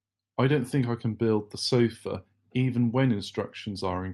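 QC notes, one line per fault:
No faults are heard in the speech. The WebRTC call path with the Opus codec is working normally, and the sound tops out around 12 kHz as that codec's bandwidth setting would give.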